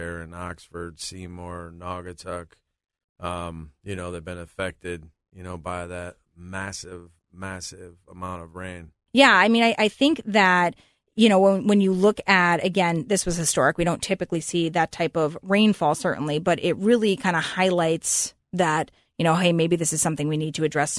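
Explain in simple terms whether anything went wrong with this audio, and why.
Nothing went wrong with this audio. Listening closely turns up no glitch or problem at any point in the recording.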